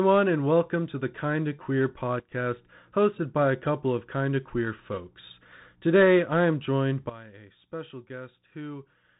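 A speech recording carried over a Bluetooth CVSD headset codec from start to finish. Nothing above about 3.8 kHz survives, so the sound is narrow and boxy. The damage is plainly audible. The one-bit delta coder cannot track loud, fast high content. Sibilants turn scratchy and harsh. A grainy hiss sits under the speech. The sound points to a 64 kbit/s CVSD link. There are also two sudden gain jumps. At 2.2 s the level drops by about 12 dB and recovers at 2.32 s. At 7.09 s it drops by about 13 dB and stays down to the end. Speech and background noise fall together each time. The likely cause is a digital gain change applied in one step with no ramp.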